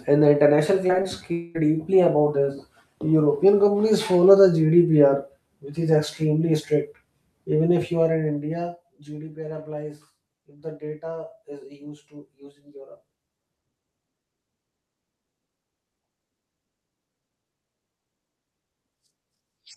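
Speech, with three kinds of fault. Short concealed packet loss comes first, at 0.87, 0.93 and 1.02 s, the last two just after "and the international". About 20 ms of audio is missing each time. The decoder stretches the preceding sound to fill the gap, leaving brief smears. A long network dropout is the likely cause of the next problem, at 1.32 to 1.57 s, just before "deeply about". For about a quarter second, nothing real is heard. A fading continuation of the last sound covers the whole gap, and that stretch of speech is lost. Zipper noise runs from 7.85 to 9.34 s. The level falls by roughly 15 dB in coarse steps, about 20 per second, with no smoothing between them. Each step clicks, so a fine ticking rides on the speech while the level drops.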